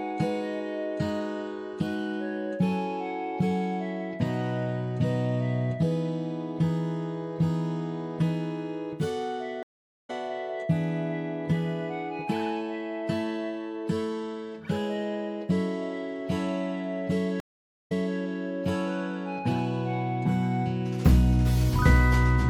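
Throughout the clip there is a watery, swirling quality, with metallic chirps on sharp, bright sounds and softened attacks. This is most likely MP3 compression, plainly audible and consistent with a low bitrate around 64 kbps. On a spectrogram the treble stops at a hard horizontal ceiling, and the upper bands break into isolated patches that blink on and off from frame to frame where weak frequency lines were zeroed.

At 9.63 s a stream reconnect occurs. The audio drops to about 0.46 s of silence, a flat line in the waveform and a blank vertical gap in the spectrogram. When it resumes at 10.10 s it has skipped ahead by roughly 0.4 s, so a piece of the sound is missing. The fresh decoder starts quietly, and the waveform swells back up over the first frame or two.

A second stream reconnect at 17.40 s leaves about 0.5 s of silence. Here the player resumes 261 ms earlier than where it cut off, so the last quarter-second before the gap is heard twice after 18.16 s. 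A spectrogram shows the same pattern on both sides of the gap, and the restart again fades in.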